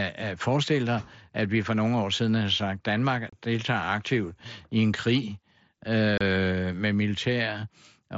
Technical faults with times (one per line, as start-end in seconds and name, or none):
3.30-3.33 unconcealed Bluetooth headset packet loss
6.18-6.21 unconcealed Bluetooth headset packet loss